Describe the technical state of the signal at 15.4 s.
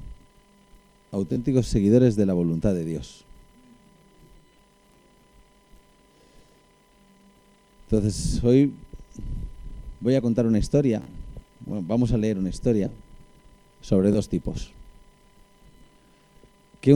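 At 15.4 s the signal runs intact, with no fault present at that moment.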